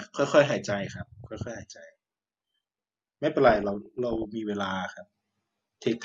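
Watery blips break over the speech from 0.51 to 1.48 s, denser bubbling, squelchy chirps from 3.47 to 4.25 s, and brief blips at 5.82 to 5.84 s. This is DAB burbling: bit errors slip past error correction, putting noise blips in single sub-bands, and wrong scale factors make sub-bands jump in level for up to a frame.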